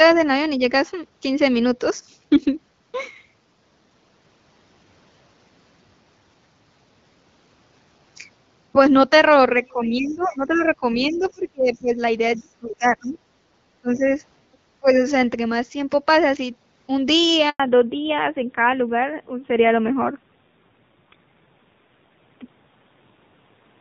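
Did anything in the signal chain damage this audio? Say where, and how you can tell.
Yes. In the call processing, the talker's speech dips by up to about 25 dB at 9.56–13.18, 13.82–14.15 and 14.80–15.04 s. This is likely speech suppressed in double talk, where the echo canceller ducks both voices at once.

Also in the call processing, a faint second voice sits about 20 to 25 dB under the talker at 9.64–11.78 and 12.35–13.18 s. This is likely the other side's voice leaking through as residual loudspeaker echo.

On the network, the sound cuts out completely for 100 ms at 17.50–17.60 s. This is a handover gap: no speech frames arrived while the call switched links.

In the codec, from 17.60 s to the end everything above 4 kHz is gone and the sound turns duller and rougher. This is a fallback to narrowband from wideband HD Voice, consistent with AMR-NB around 7.4 kbit/s.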